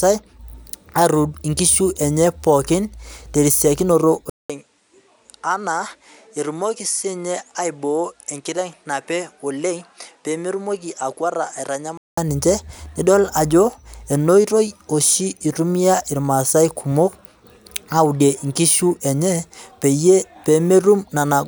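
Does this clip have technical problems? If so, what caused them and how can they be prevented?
Yes. Just after "pookin tesiokinoto", from 4.30 to 12.17 s, the sound goes duller and quieter, likely from the input switching to a poorer device. A spectrogram shows a 0.2 s gap at the switch, nothing above 11.4 kHz, and a smaller waveform, about 10 dB down. Locking the recording input to one device and disabling automatic device switching would prevent this.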